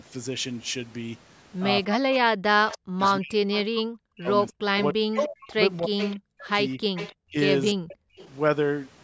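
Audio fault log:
1.85–7.85 s, speech suppressed in double talk: the echo canceller likely mistook overlapping talk for echo, so the speech dips by up to about 40 dB, about three seconds in total.
2.69–3.61 s, 4.5–6.17 s, 6.95–7.14 s, 7.88–8.29 s, echo leak: residual loudspeaker pickup is likely passing the canceller, giving a 297 ms delayed copy about 10 dB below the speech, about 20 dB below in the last stretch.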